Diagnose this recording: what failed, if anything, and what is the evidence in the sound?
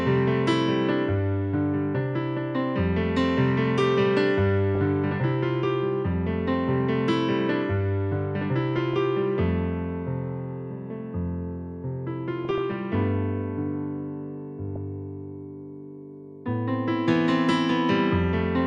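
Short bursts of watery, burbling disturbance break into the sound at 4.75–4.89 s, 8.75–8.94 s and 12.45–12.72 s, with one brief blip at 14.76 s. This is DAB burbling, a codec-stage fault caused by weak reception. Bit errors at a fraction of a percent slip past the receiver's error correction into the MP2 audio data. Corrupted values in individual sub-bands then decode as brief spurts of noise or as sudden level jumps lasting up to a frame.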